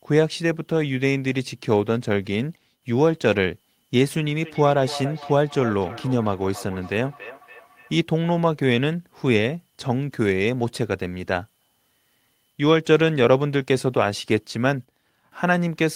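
From 4.4 s to 7.98 s, the speech comes round again at a steady interval of about a third of a second, each repeat thinner and more ringing than the words it follows, peaking at about 15 dB below the speech. This is feedback echo between two devices: two devices in the same room are on one call, and one plays back what the other's microphone sent. That microphone picks the playback up again, and neither device's echo canceller removes sound played by the other.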